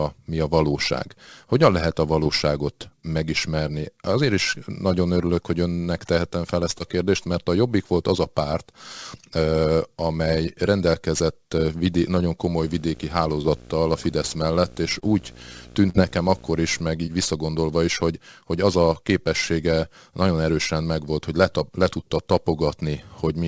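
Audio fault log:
2.24–2.28 s, 6.78–6.82 s, 13.42–13.46 s, 15.00–15.04 s, 15.90–15.96 s, 17.06–17.09 s: short concealed packet loss. Brief smears or wobbles occur right after "lehet a", between "önnek tehetem fel ezt" and "a kérdést mert a", and just before "visszagondolva is hogy hogy". Each gap is about 20 ms of missing audio (40 ms at 15.90 s), which the receiver patched by extending the preceding sound before blending back.
12.57–16.81 s: video or display buzz. A 60 Hz buzz with hash above it sits about 25 dB below the speech. It points to a screen or video cable coupling interference at its 60 Hz field rate into the audio path.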